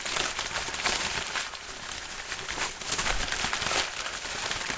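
No faults are audible; the sounds come through a call path whose content stops at 8 kHz, which fits a wideband codec such as G.722.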